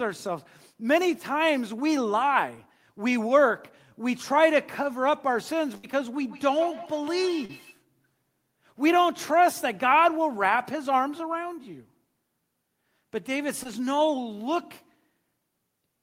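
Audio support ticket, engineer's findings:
Burst of packet loss, 5.77–5.85 s. Last sound held as a decaying buzz/hiss for about 58 ms, then playback jumps ahead; about 60 ms of speech never heard. Probable component: network path/jitter buffer. Consecutive packets lost or arrived late; receiver extended and faded prior audio.

Feedback echo between two devices, 6.17–7.75 s. Speech returns at intervals of around 150 ms, thinner and ringing with each pass, peaking about 17 dB below the direct speech. Probable component: second endpoint in same room. Its loudspeaker output re-enters the other microphone; neither echo canceller covers the other device's playback, so the loop recirculates.

Short concealed packet loss, 7.45–7.51 s and 13.63–13.67 s. Brief smear/wobble; first event about 36 ms synthesized over 40 ms missing, second 20 ms over 20 ms. Probable component: decoder packet-loss concealment. 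Late/lost packet replaced by pitch-continued or noise-shaped fill, then cross-faded back into received audio.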